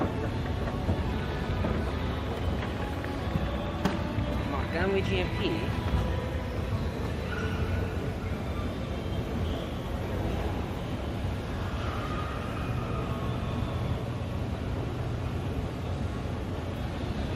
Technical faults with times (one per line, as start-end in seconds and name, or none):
1.07-1.09 skip ahead